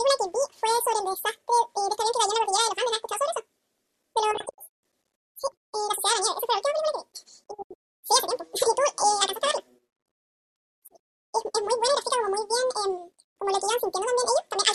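From start to finish the speech plays at a wrong sample rate: it runs at twice normal speed and sits a full octave high, which fits audio recorded at 24 kHz being played back at 48 kHz without conversion, so timing and pitch double together.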